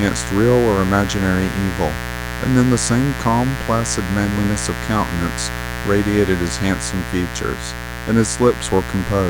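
Mains buzz runs under the speech from start to finish: sharp 60 Hz switching spikes leaking in, giving a raspy, harmonic-rich drone sitting not far below the speech.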